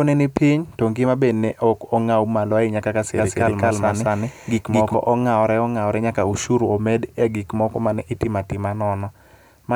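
From 3.16 s to 4.94 s a doubled audio track appears: an equally loud copy of the speech trails by around 200 ms, likely from a slower second capture path. Unlike echo, it has no decay or room colour and switches in and out abruptly.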